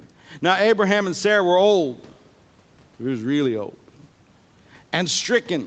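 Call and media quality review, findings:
No findings for call and media quality review: no faults observed in this speech clip.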